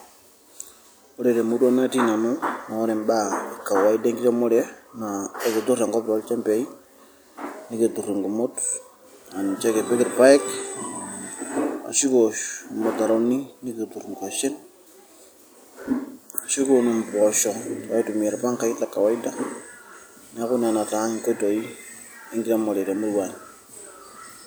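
Loose connector crackle appears from 15.81 to 15.91 s in this speech recording. A worn or dirty contact in the signal path kept making and breaking as it shifted, chopping the audio on and off and producing a brief, irregular burst of scratchy crackle lasting about 90 ms.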